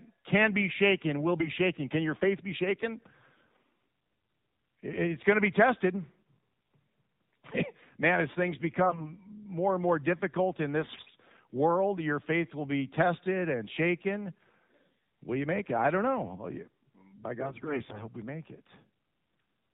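The whole clip has the AMR narrowband mobile codec on it: nothing above 4 kHz, and a plainly buzzy, synthetic edge that fits a low mode around 7.4 kbps. Then come AMR bit errors at 1.39–1.49 s, 8.84–9.16 s, 10.80–11.15 s and 17.40–18.04 s. Flipped bits in the frames, roughly seven percent, misplace the excitation pulses, so the speech turns hoarse and gargly while keeping its pitch and level.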